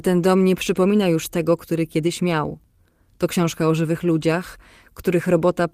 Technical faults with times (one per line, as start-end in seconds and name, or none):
2.07-2.09 lost packet rebuilt from error correction